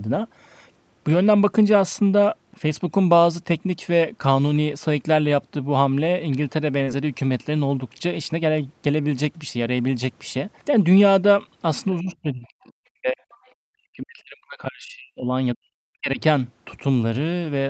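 Speech, carried over a call with audio up to 8 kHz. At 6.83 to 6.89 s there is short concealed packet loss: about 40 ms never arrived, and the decoder extended the preceding sound to cover it, leaving a brief smear. Within that gap, from 6.87 to 6.89 s, one lost packet was rebuilt from error correction, giving 20 ms of rougher, noisier audio. The speech drops sharply from 12.01 to 13.23 s, 13.61 to 15.36 s and 15.55 to 16.20 s, at worst by about 40 dB. This is likely speech suppressed in double talk, with the echo canceller turning everything down. Between 13.31 and 13.53 s a faint second voice comes through, about 35 dB below the speech, which points to the other side's voice leaking through.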